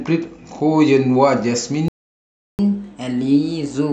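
At 1.88 s the speech stops dead and stays silent until 2.59 s, a gap of about 0.71 s. This is a playback stall, most likely the player running short of data or its output thread being held up. Unlike a dropout from lost packets, which clips out a short chunk and carries on at a later point, this break is long and clean, and the speech then resumes.

From 2.59 s to the end of the clip the speech plays at 1.15 times normal speed, and the pitch rises by about two semitones. This is catch-up at higher speed: the player is resampling its backlog faster to recover the time lost in the stall. A plain pitch-shift fault would change the pitch without changing the tempo. Here the timing is hurried as well, and the effect begins exactly where the silence ends.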